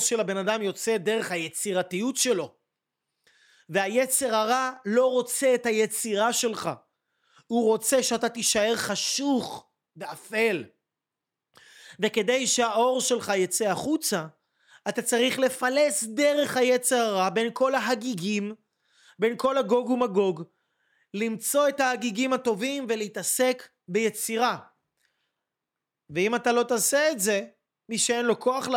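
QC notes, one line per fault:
No faults to log for this speech clip.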